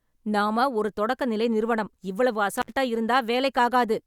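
At 2.57 s, just after "தொடக்க நிலை நிறுவனம் இவ்வளவு", an intermittent contact opens. The speech drops out for about 64 ms, with crackle at the edges and faint hiss.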